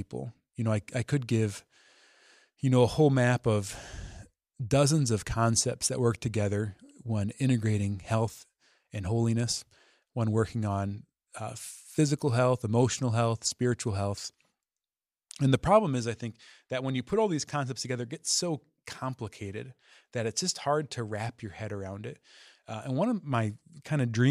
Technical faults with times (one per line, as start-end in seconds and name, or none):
none